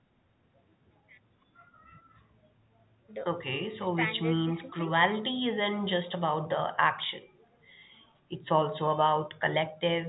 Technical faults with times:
none

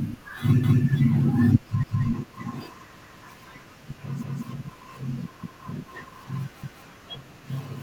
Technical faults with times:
0.63-0.84 overlapping chunks
1.83-2.04 overlapping chunks
3.03-3.24 overlapping chunks
4.23-4.44 overlapping chunks
5.43-5.64 overlapping chunks
6.63-6.84 overlapping chunks

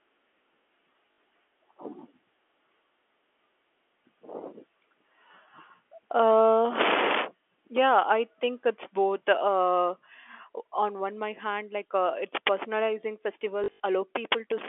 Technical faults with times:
1.12-1.18 packet loss with last packet repeated
13.64-13.80 packet loss with last packet repeated

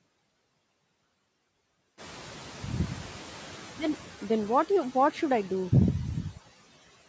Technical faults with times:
0.00-7.09 noise suppressor artifacts
1.97-4.04 noise suppressor catching up

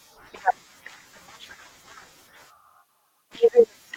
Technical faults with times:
none

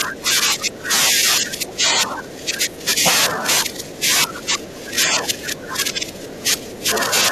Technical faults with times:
0.00-2.99 speech suppressed in double talk
3.29-7.12 speech suppressed in double talk

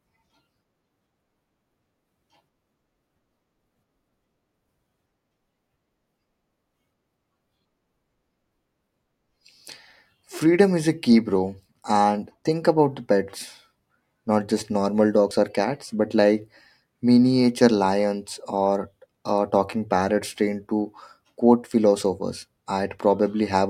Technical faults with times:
15.31 dropped buffer (overrun)

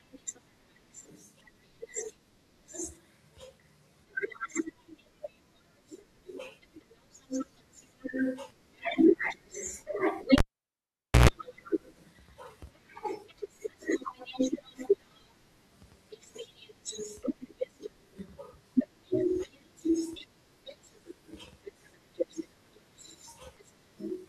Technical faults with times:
10.38-11.29 cable pulled and plugged in

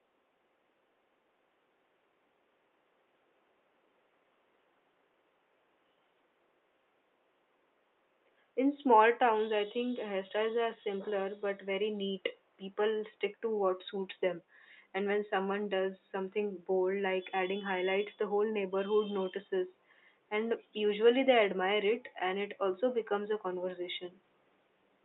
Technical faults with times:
none

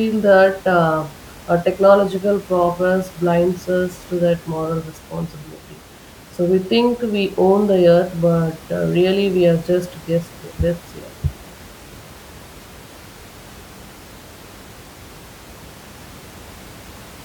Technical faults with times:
none

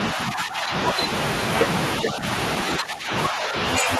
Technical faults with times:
0.14-1.09 speech suppressed in double talk
2.01-2.25 speech suppressed in double talk
2.79-4.00 speech suppressed in double talk

